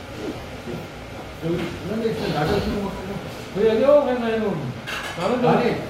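From 0.36 to 0.44 s, about 70 ms of lost LE Audio frames (longest run around 40 ms), and 40 ms more at 2.71 s, are concealed by replaying the last spectrum with random signs. The sound smears into noise instead of cutting to silence like a plain dropout.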